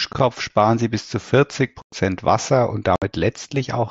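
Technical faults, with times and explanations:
1.82–1.93 s and 2.96–3.02 s, unconcealed Bluetooth headset packet loss: runs of voice packets between headset and phone were lost and nothing filled them, leaving silent holes of 105 ms and 60 ms with abrupt edges in the mSBC-coded speech.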